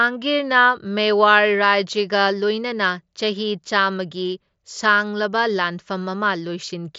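The speech has no audible technical faults; it comes over a wideband Bluetooth mSBC headset link, with its band reaching up to about 8 kHz and the slight graininess on louder passages that this codec leaves.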